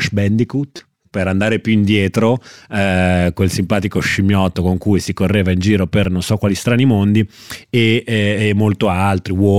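At 0.77 to 0.79 s the speech breaks into a brief buzz: a repeated buffer, where a 5.8 ms piece, which fits a 256-sample buffer, plays four extra times because fresh audio arrived late, replacing about 20 ms of the speech. At 4.09 to 4.14 s a short stutter marks repeated frames: one 26.1 ms compressed frame is decoded twice more, adding 52.2 ms. At 6.04 s a single click is another repeated buffer, one 5.8 ms piece replayed once, losing about 5 ms.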